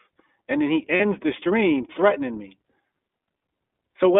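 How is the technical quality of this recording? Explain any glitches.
The recording has plainly audible codec damage throughout and one short dropout near the one-second mark.

iLBC codec, throughout: the speech is narrowband, confined to roughly 250 Hz to 3.5 kHz, with 20 ms frames coded independently, which fits iLBC's 15.2 kbps mode. The coarse excitation coding makes the voice sound clear but rough and somewhat synthetic, with no air above the telephone band.

Lost iLBC frames, 0.96 to 1.01 s: a gap of about 40 ms, pointing to two lost 20 ms frames. The decoder fills it by repeating the last pitch cycle blended with noise, so a brief held, buzzy vowel replaces the missing sound before clean speech resumes almost immediately.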